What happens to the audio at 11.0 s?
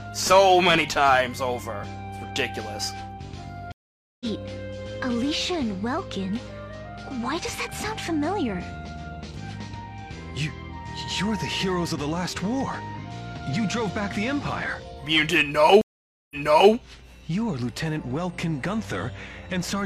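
Nothing goes wrong at 11.0 s; the audio plays through that moment intact, with no dropout, glitch or distortion.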